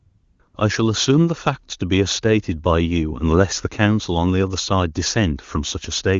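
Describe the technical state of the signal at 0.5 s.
At 0.5 s the handset's voice activity detection treated the signal as silence and stopped sending speech frames for about 60 ms, from 0.47 to 0.53 s. This is AMR comfort noise: the receiving end covered that gap with synthetic noise built from a rough estimate of the background's level and spectral shape. The real background briefly gives way to a smooth, even hiss that switches in and drops out, while the surrounding wideband audio stays clean enough to point to a high AMR-WB rate.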